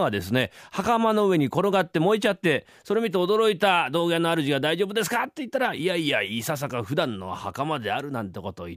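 No technical faults can be heard anywhere in this speech recording.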